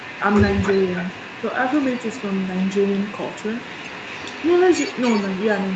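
Echo leak runs from 0.0 to 0.21 s, again from 0.56 to 1.47 s, and from 1.65 s to the end. A faint copy of the speech trails the original by 285 ms. It sits roughly 20 dB down in the first and last stretches and rises to about 15 dB down in the middle one. The likely cause is a far-end loudspeaker whose echo canceller let part of the returned signal through.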